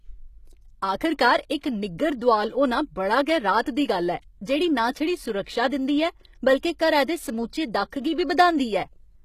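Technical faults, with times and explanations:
Throughout, HE-AAC compression: the whole clip carries plainly audible codec damage, and it's likely down to HE-AAC at a very low rate, something in the region of 20 kbps going by how thin it gets. The top end isn't really there as recorded. It's rebuilt by copying lower bands upward, so the s sounds come out gritty and a bit metallic, the harmonics don't line up across the join, and there's nothing at all above 14.9 kHz.
3.62 to 3.66 s, pre-echo: right after "दोआल होना बड़ी गै" and just before "दी गल्ल", a short hiss creeps in about 40 ms ahead of a sharp attack. The codec spreads its noise across the whole block, and the attack sits late in that block, so noise sized for the loud part leaks into the quiet gap before it. That leaves the onset sounding smeared and softened rather than crisp.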